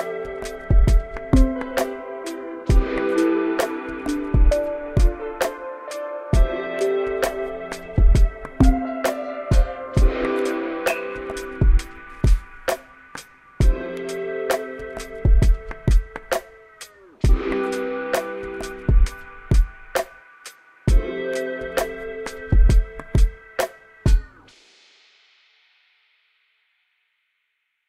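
Nothing stood out as a technical fault on listening through this recording of sounds.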